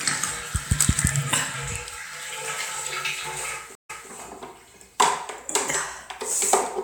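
Stream reconnect at 3.75 s: the connection dropped, leaving 137 ms of silence, then a fresh decoder resumed 209 ms earlier, briefly repeating the sound.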